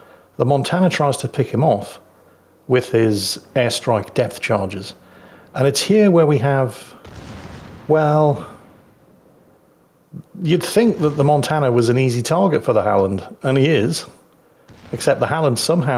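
Gain pumping runs through the whole recording, with the level swinging by around 5 dB. Loud and soft passages sit closer together than they should, giving a squashed, breathing quality. The likely cause is input gain set far too high, with a fast limiter or compressor clamping down on each peak and releasing between them.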